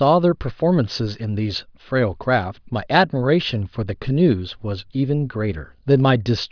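Speech recording with no audible technical faults.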